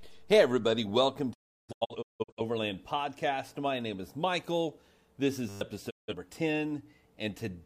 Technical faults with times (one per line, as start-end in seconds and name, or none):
1.32-2.41 digital broadcast dropout
5.49-5.61 system hang loop
5.89-6.14 digital broadcast dropout